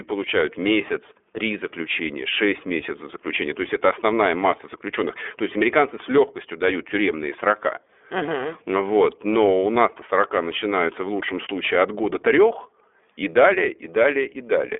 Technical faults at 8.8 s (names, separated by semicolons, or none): iLBC codec